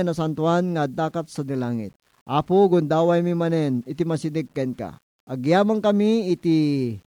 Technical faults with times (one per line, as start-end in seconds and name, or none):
0.00-7.15 low bit depth without dither